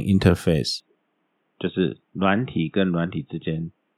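Input switched to a poorer device at 0.8 s, lasting to the end: the speech abruptly narrows, with nothing above 3.8 kHz, turning dull and boxy, likely from the recording jumping to a lesser microphone. Level drops about 5 dB, faint new background noise appears, and no gap marks the switch.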